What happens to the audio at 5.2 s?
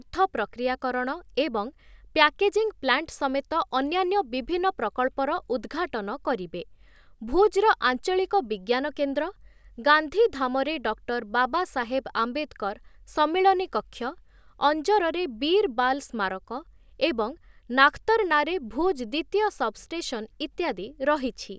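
Nothing goes wrong at 5.2 s; the speech runs through that moment intact, with no dropout, click or distortion to be heard.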